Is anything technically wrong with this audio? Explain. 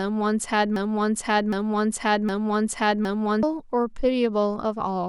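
Yes. From 0.76 s to 3.43 s the speech falls into a broken-record loop: a fragment about 0.76 s long plays three times back to back, identically. The likely cause is a player or stream stall that kept re-sending the last buffered piece, so the speech meant for that stretch is lost. On a waveform and spectrogram, the same block of energy and harmonic pattern repeats at exact 0.76 s intervals.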